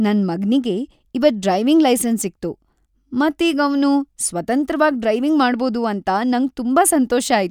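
Nothing in the recording stood out as a technical problem on listening.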